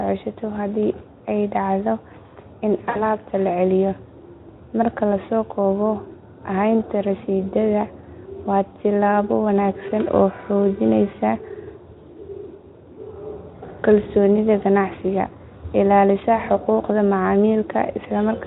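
A speech recording carried over a Speex link, with the codec's own coding damage faint at most, shows VoIP packet loss concealed by the speech codec twice. From 2.89 to 3.06 s, roughly 60 ms of missing audio, which fits three lost 20 ms frames, is bridged by the decoder stretching its last pitch and filter into a buzzy tone or coloured noise that fades, and the sound stays weakened until the decoder recovers. A shorter gap at 16.65 s, about one frame, is bridged the same way.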